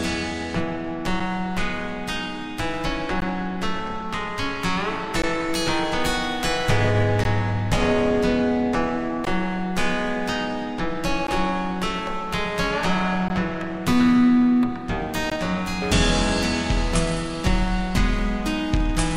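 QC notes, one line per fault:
1.20 to 15.30 s, gap at a join of encoded pieces. Short silences open in continuous sound at 1.20, 3.20, 5.22, 7.24, 9.25, 11.27, 13.28 and 15.30 s, roughly every 2 s. The first lasts 6 ms, the rest 16 ms each. The pieces were encoded separately and joined untrimmed. Encoder start delay and final-frame padding remain as silence. The codec smears the abrupt edges, then the sound resumes where it stopped.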